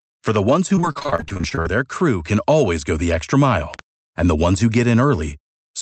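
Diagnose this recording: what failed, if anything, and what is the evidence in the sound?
Loud pops sit on top of the speech at 0.36–0.38 s (one sharp pop) and again at 3.74–3.81 s (two in quick succession), each about 10 dB above the signal. The speech runs straight through underneath, which points to a voltage spike in the analogue wiring or driver, likely a plug, switch or static discharge.

From 0.75 to 1.67 s there's repeated packet loss, and you can hear the robotic, choppy texture. The network side of this Opus call path kept dropping or delaying packets, leaving more than a dozen holes, the longest about 26 ms. The jitter buffer patched each one by stretching the last bit of sound, so roughly a third of that stretch is concealment rather than real audio. That's where the clipped quality comes from.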